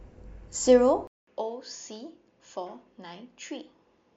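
At 1.07 s the speech drops out for about 200 ms. It returns duller and somewhat quieter, and stays that way to the end. Nothing is left above 6.9 kHz, so the crisp top of the sound is gone. A faint new background noise sits far below the speech. The cause is likely an input switched to a poorer device. The system seems to have moved to another microphone or a headset link with a narrower band and its own tone.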